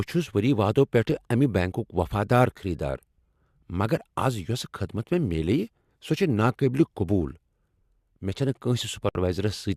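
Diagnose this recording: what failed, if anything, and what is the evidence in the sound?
The speech cuts out at 9.09 s and resumes at 9.15 s, a gap of about 62 ms. That's a gap at a join of encoded pieces: separately encoded chunks were spliced untrimmed, so encoder delay and final-frame padding left silence with smeared edges.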